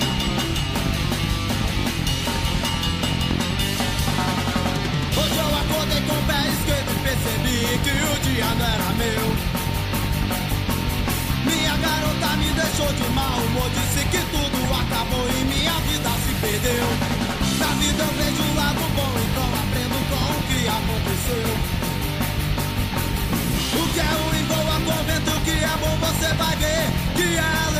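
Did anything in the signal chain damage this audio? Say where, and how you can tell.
No, nothing in the signal chain stood out as damaging this audio on listening.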